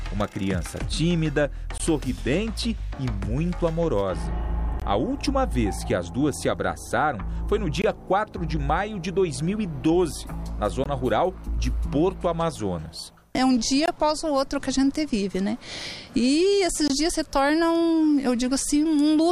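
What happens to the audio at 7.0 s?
Nothing goes wrong at 7.0 s; the audio runs on intact through that moment, with no dropout, click or other fault.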